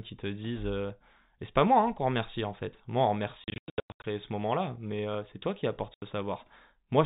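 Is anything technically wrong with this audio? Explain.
Yes. There is packet loss filled with silence in two places. From 3.44 to 4.04 s, right after "en fait moi on", about 460 ms of the sound drops out in scattered holes over 600 ms, the longest run about 100 ms. From 5.94 to 6.02 s, after "c'est toi qui apporte", an 80 ms hole appears. The receiver played silence for missing packets. The hole sizes fit 20 ms packets. Concealment would smear or repeat sound into each gap, but here the gaps are dead quiet with hard edges. The telephone-band G.711 sound underneath is normal for that format.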